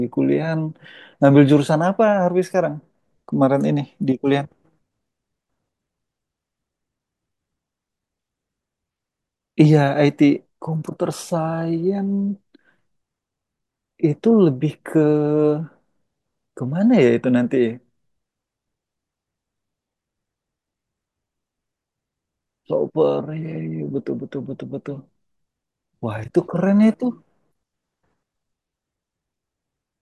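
No technical faults can be heard anywhere in this speech recording. There is nothing here to mark with a time or trace to a cause.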